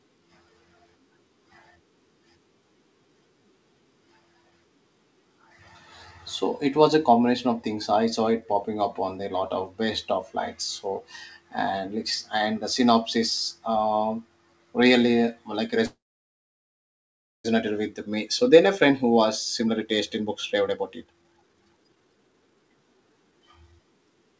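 At 15.86 s the speech stops abruptly. A short trailing buzz carries on from the last sound, then gives way to near-silence that lasts about 1.5 s. At 17.46 s the speech resumes exactly where it broke off, with nothing skipped. This is a call audio freeze. The likely cause is packets stalling in transit, leaving the jitter buffer empty so that the receiver could only extend and then fade the last sound. The 1.58 s gap pushes everything after it later by the same amount.

The delay is then worked off by jitter buffer speed-up. From 18.50 s to 19.18 s the speech runs slightly fast, at about 108% of normal speed, and loses roughly 70 ms. From 19.60 s to 23.80 s it sounds clearly hurried, at about 136% speed, and roughly 1.5 s is trimmed away. The pitch stays unchanged throughout because the receiver cuts out many tiny pitch-period slices rather than resampling. The call path itself shows a band limit with nothing above 8 kHz, which fits a G.722 wideband codec.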